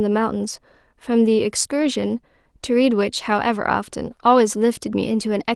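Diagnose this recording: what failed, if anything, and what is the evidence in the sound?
From 1.81 to 1.87 s the speech turns briefly rougher and noisier with no gap, the mark of a lost packet rebuilt from error correction at the network stage. About 40 ms, fitting two 20 ms Opus packets, was replaced by low-bitrate in-band copies carried in the following packets.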